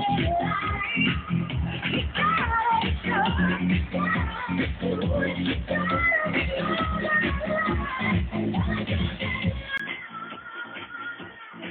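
From 9.78 s, after a 20 ms gap, the audio turns dull and quieter, with nothing above 3.5 kHz: the input likely switched to a poorer device.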